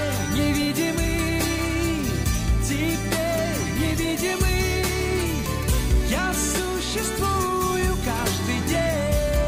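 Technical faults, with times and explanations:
No technical faults can be heard anywhere in this audio. There is nothing to timestamp or explain.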